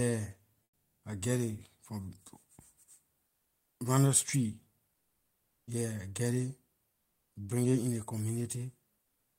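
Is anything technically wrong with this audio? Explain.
Yes. In the pauses at 0.63–1.03 s, 3.27–3.79 s and 9.01–9.39 s, the real background gives way to comfort noise, a flat, featureless hiss about 5, 2 and 4 dB quieter. That's likely discontinuous transmission, with the receiver synthesising noise while the sender goes quiet.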